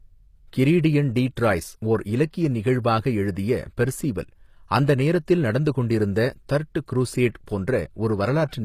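Throughout the speech, the treble sounds rebuilt rather than captured, which points to HE-AAC compression as the likely cause, at a low bitrate that fits roughly 24 kbps. The damage is plainly audible: s sounds come across gritty, metallic or lispy, because the upper band is copied from lower bands and shaped only coarsely. On a spectrogram, energy stops abruptly at 14.9 kHz, and the upper region shows repeated patterns whose harmonics fail to line up with those below.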